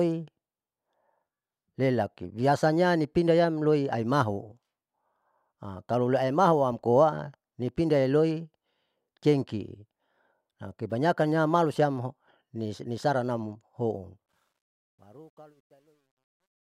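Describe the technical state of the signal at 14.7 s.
At 14.7 s the fade-out shows truncation distortion on a fade. It runs from 14.26 s, just after "amkebanyakannam malusiam nisaranam houn", to 16.61 s. The fade drops bits without dither, which fits an 11-bit stage. The quiet tail turns gritty, worst between 15.19 and 16.61 s.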